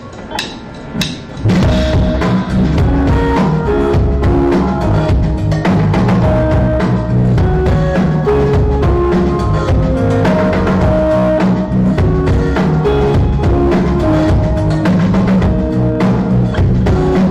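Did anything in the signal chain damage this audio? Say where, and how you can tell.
Yes. A stage that can't pass the full level, most likely the converter or a sample-format conversion, was driven about 14 dB past its ceiling for the whole clip, so hard clipping flattens the waveform tops wherever the signal is loud, affecting nearly a third of the samples. Those squared-off peaks generate harmonics high up the spectrum, which is why every louder moment carries a harsh, buzzing fuzz rather than occasional crackle, from start to finish.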